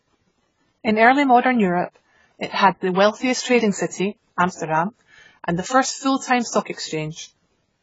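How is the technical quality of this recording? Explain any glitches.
Quality's pretty rough: the speech is heavily compressed all the way through, plus there's one pre-echo smear.

AAC compression runs the full length. Nothing gets above about 7.7 kHz, so the top end is gone and everything sounds dull, and sibilants pick up a fizzy, warbly texture. That's likely AAC-LC pushed to a very low bitrate, something in the region of 16 kbps. The encoder can't spend bits on the upper bands, so it drops them and quantises the rest coarsely, which smears the detail.

Pre-echo shows up from 2.47 to 2.53 s, just before "had the wealthiest trading". For about 59 ms there's a short hiss ahead of the attack, and the onset itself comes across soft rather than crisp. The codec spreads its quantisation noise across the whole transform block, so noise sized for the loud attack leaks back into the quiet stretch just before it.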